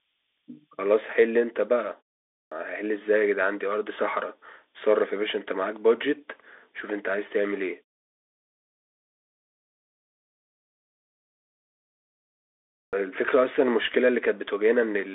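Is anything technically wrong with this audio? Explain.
Yes, two things. The whole clip has gone through a Bluetooth CVSD headset codec, which fits a 64 kbps link: the band runs roughly 250 Hz to 3.6 kHz with nothing above 3.8 kHz. The encoder sends only one up-or-down bit per sample with an adapting step, so loud bright consonants outrun it and crunch, s sounds get scratchy, and there's a grainy hiss under the speech.

There are also two clipped starts after a pause. At 2.34 s, after a 0.4 s gap, about 175 ms is swallowed, and at 12.74 s, after a 5.0 s gap, about 189 ms goes. The output device dozes in silence and takes a moment to wake, so the speech jumps in abruptly, missing its opening sounds. The pauses also drop to silence, though that part doesn't cost any speech.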